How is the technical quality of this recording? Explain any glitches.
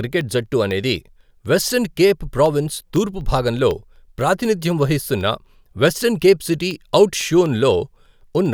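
The recording is marred by periodic USB or driver dropouts: from 0.21 s to 8.46 s, about thirty tiny gaps, each a fraction of a millisecond, go silent every 0.25 s as the driver stalls. They click only during speech, and their strict regularity separates them from random crackle.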